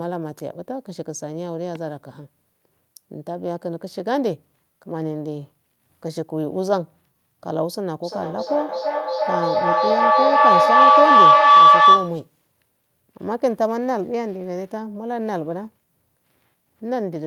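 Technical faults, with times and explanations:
1.75 to 1.78 s, loud pop: a single sharp pop peaking about 5 dB above the speech, with the speech continuing underneath. A voltage spike from a plug, switch or static is the likely cause. On the waveform it is a tall narrow spike; on the spectrogram, a thin vertical stripe spanning all frequencies.
8.03 to 12.27 s, feedback howl: a tone near 1 kHz builds up and peaks about 13 dB above the speech, pulsing roughly every third of a second. A microphone is picking up a loudspeaker in the same room, and each trip around that loop adds level at the frequency the loop favours. The spectrogram shows a bright horizontal line near 1 kHz that strengthens in regular beats, and the waveform's envelope swells until the loop is broken.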